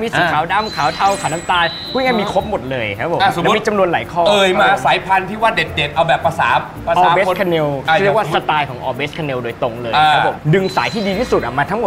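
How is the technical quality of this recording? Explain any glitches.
The technical quality is sound, with no glitches to explain.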